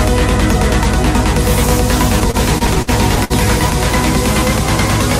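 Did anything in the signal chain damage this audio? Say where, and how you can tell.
Yes. At the network stage, packets kept arriving late, so the jitter buffer ran dry twelve times between 2.20 and 3.73 s. Each stall held the last sound, about 213 ms in total (longest 57 ms), causing repeated stalls (stutter): nothing is lost, but the audio drags and hiccups.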